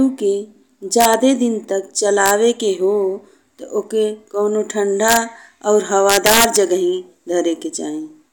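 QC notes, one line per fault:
1.01–1.14 s, 2.26–2.31 s, 5.08–5.17 s, 6.10–6.56 s, integer overflow: loud speech peaks pushed about 1 to 7 dB past full scale wrap to the opposite sign instead of limiting, giving harsh cracks far nastier than clipping, worst in the long stretch at 6.1 s.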